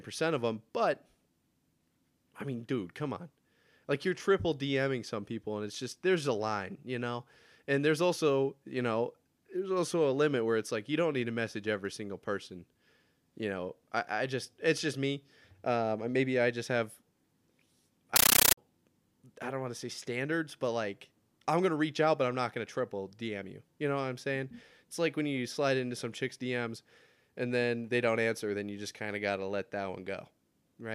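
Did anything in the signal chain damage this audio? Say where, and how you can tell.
Yes. From 18.16 to 18.57 s the speech is replaced by loud, chattering static: 13.3 ms noise bursts repeating 31.25 times a second. That's a compressed stream played as audio. The playback link passed a Dolby Digital bitstream, which fits AC-3, straight through as PCM instead of decoding it.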